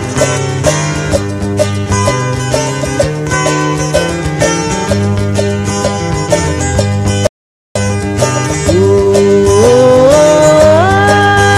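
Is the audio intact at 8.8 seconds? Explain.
No, hard clipping runs through the whole clip: it's driven about 7 dB past the ceiling, so a small share of peaks get sliced flat, crackling.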